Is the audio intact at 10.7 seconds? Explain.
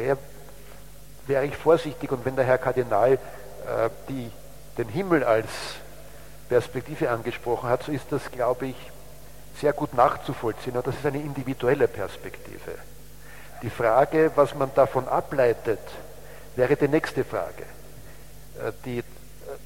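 Yes, the audio at 10.7 seconds is intact, with no dropout, click, distortion or other technical fault to be heard at that moment.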